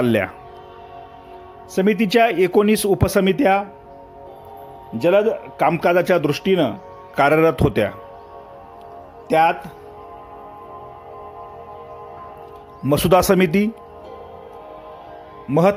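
Nothing technically wrong turns up anywhere in this audio, so there's nothing to time or trace back to a cause.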